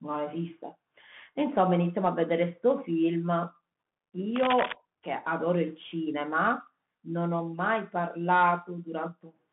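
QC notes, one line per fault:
Throughout: Bluetooth CVSD headset codec. The speech sits in a narrow phone-style band, roughly 150 Hz to 3.5 kHz, and nothing gets through above about 3.8 kHz, so it's thin and boxy. The codec just nudges the level up or down one bit at a time, which fits a 64 kbps CVSD link, so loud high sounds outrun the adapting step and break up. S sounds come out scratchy, and a grainy hiss sits under the whole thing.
4.36–4.74 s: cable scratch noise. For a bit under half a second there's a dense, uneven burst of scratching and rustling over the speech, nearly as loud as the speech itself. It sounds like a worn cable, connector or control being moved, with its contact resistance jumping around quickly and dumping ragged bursts of noise into the signal. That's the likely cause, and it fits the short, crackly, irregular texture here.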